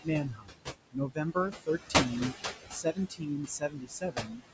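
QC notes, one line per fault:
throughout: noise suppressor artifacts. The suppressor treats every band it judges to be steady noise as something to remove and turns it down by about 17 dB, recalculating frame by frame. Because the room noise sits only about 7 dB below the speech, the gain keeps swinging: the background drops away in the gaps between words and comes back up underneath them. The result is a pumping noise floor that follows the speech.
0.24–0.74 s, 0.92–1.18 s, 2.7–3.29 s, 3.46–4.42 s: speech cut by the noise suppressor. In these four stretches the suppressor mistook parts of the speech for noise and attenuated them along with the background, by about 22, 21, 18 and 17 dB at the deepest points. Soft consonants, word endings or quieter syllables come out swallowed or faint. Roughly 0.4, 0.15, 0.3 and 0.7 s of speech are affected.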